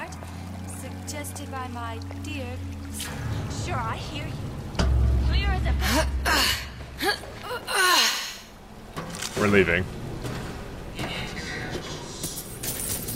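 The audio switches to an adaptive stream at a lower bitrate from 5.17 to 7.17 s, the likely cause being a slowed connection. Codec artefacts rise abruptly without any gap, consistent with a drop from roughly 96 to 24 kbit/s. On a spectrogram, content stops at 14.9 kHz.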